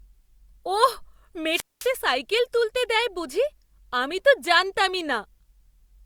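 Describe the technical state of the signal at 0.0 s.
The audio is intact at 0.0 s, with no fault in the signal at that moment.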